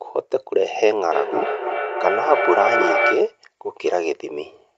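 From 1.11 to 3.42 s there is feedback echo between two devices. One device replays the other's microphone, which picks it up again. The speech returns roughly every 0.3 s. The loudest repeat is only about 1 dB below the speech itself.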